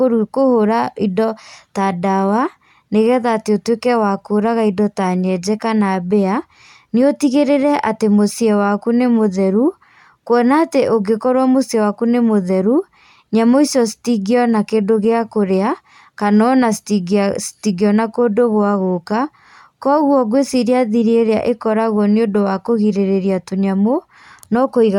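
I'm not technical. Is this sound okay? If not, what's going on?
Yes, this recording sounds fine from a technical point of view. I can't hear any problem anywhere in it.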